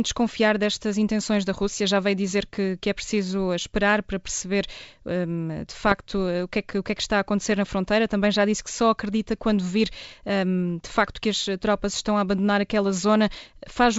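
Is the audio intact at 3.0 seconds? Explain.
Yes, at 3.0 seconds the speech is intact, carried cleanly through G.722 wideband telephone coding at 64 kbit/s with no fault at that moment.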